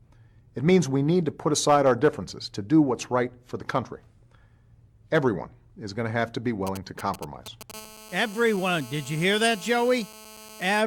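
Right after "to have to be", from 6.67 to 7.72 s, a galloping dit-dit-dit of ticks and brief raspy buzzes at about 217 Hz cuts in, roughly 15 dB below the speech. These are GSM signalling bursts: a nearby 2G phone transmits short groups of radio pulses, and the audio circuitry rectifies them into audible clicks.

From 7.74 to 10.82 s the pattern turns into a continuous, hard GSM phone buzz at about 217 Hz, rich in harmonics, unrelated to the speech and about 20 dB below it. The phone has entered a call and now transmits its bursts 217 times a second without a break, so the rectified interference becomes a steady drone.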